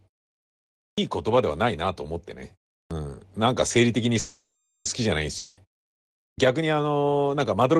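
At 0.88 s, 2.8 s and 6.27 s, speech starts abruptly after a pause. Each time about 0.1 s is swallowed: a clipped start after a pause, as the output device wakes too slowly. From 4.19 to 4.88 s a call audio freeze inserts a fading buzz of about 0.66 s. The likely cause is a starved jitter buffer, and nothing is lost. From 5.37 to 5.60 s a long network dropout fills about 0.2 s with fading sound, and that audio never returns. The likely cause is lost packets.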